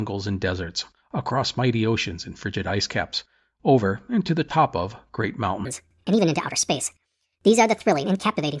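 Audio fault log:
5.65–8.6 s: wrong sample rate after "the top of great"; speech jumps 1.5 times faster and about 7 semitones higher together, fitting 16 kHz audio played at 24 kHz, unlike pitch-shifting, which keeps tempo.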